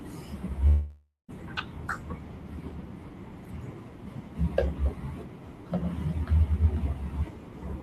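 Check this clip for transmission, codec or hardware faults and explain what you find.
One fault stands out: from 0.67 to 1.31 s, likely a long network dropout. About 0.62 s of speech is missing. The last sound continues as a fading buzz or hiss, then about 140 ms of silence. This is far longer than a brief concealed glitch.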